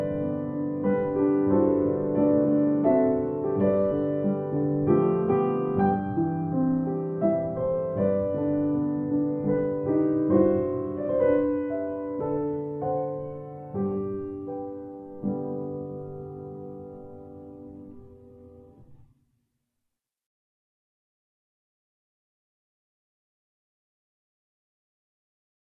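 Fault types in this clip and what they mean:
No technical faults are audible anywhere in the clip.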